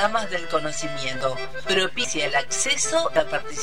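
At 1.21 s, 2.04 s and 3.16 s there are abrupt forward jumps in the sound, losing about a tenth of a second at the first two and a fifth at the last. These are likely dropped buffers (overruns): unread audio was overwritten and the remaining pieces spliced together without a gap.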